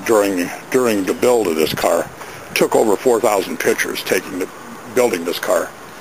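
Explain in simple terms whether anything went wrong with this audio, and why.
At about 1.80 to 1.84 seconds there is a short blip caused by damaged data in a compressed stream. A few bytes of the file were corrupted, so the player misread that tiny stretch and had to find its place again before continuing.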